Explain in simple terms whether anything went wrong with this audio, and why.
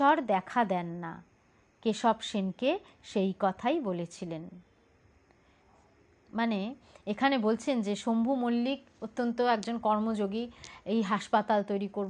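Nothing went wrong here; it's a fault-free recording with no glitches, dropouts or interruptions anywhere to point to.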